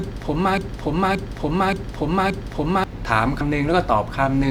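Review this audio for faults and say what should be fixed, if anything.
From 0.58 to 2.84 s there's a broken-record loop: a 575 ms chunk of speech plays four times back to back, likely from a stalled player or stream. Watch for stalls and resync or drop out cleanly rather than replaying the held buffer.

At 3.41 s compressed frames were skipped. The speech jumps ahead by about 150 ms, which fits a few 32 ms frames going missing. Check the file's integrity and use error concealment in the decoder so damaged frames get patched rather than silently dropped.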